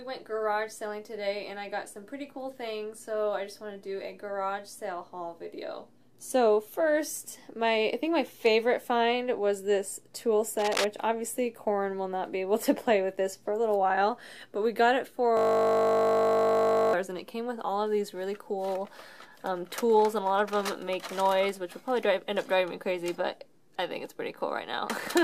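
From 10.59 to 10.85 s, cable scratch noise, likely from a worn connector being moved, adds dense, ragged bursts nearly as loud as the sound, shown as broadband speckle on a spectrogram. From 15.37 to 16.93 s, a system hang loop repeats one 20 ms piece, producing a steady 50 Hz buzz with identical waveform cycles and evenly spaced harmonic lines.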